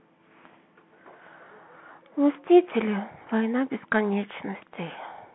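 From start to finish the speech carries the Bluetooth CVSD headset codec. Nothing passes above about 3.8 kHz, and the usable band sits near 150 Hz to 3.4 kHz, which fits a 64 kbps one-bit delta stream whose step size chases the waveform. The damage is plainly audible: s sounds turn scratchy, loud bright moments overload and rasp, and a granular hiss sits underneath. A clean narrowband phone line would sound dull but smooth, without that grain.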